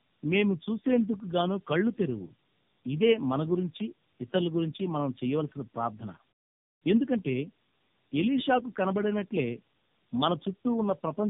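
Tandem speech coding runs through this whole speech clip: the signal appears to have been decoded and re-encoded across several codec borders, likely three AMR-NB-style narrowband stages with G.711 links between, each compounding the last. The voice sounds rough, muffled and warbly, with nothing above 3.7 kHz.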